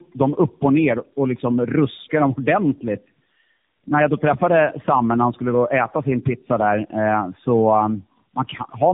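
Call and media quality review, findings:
Tandem speech coding, whole clip: rough, muffled, warbly speech, band-limited to 3.7 kHz. Points to about three narrowband AMR-type coding passes in a row, each re-coding the last one's errors. Artefacts compound, so roughness exceeds what any single low-rate codec would produce.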